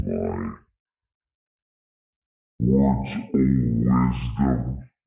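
Everything sounds low and slow, half speed and a full octave down throughout: a wrong sample rate, fitting 16 kHz audio played back at 8 kHz.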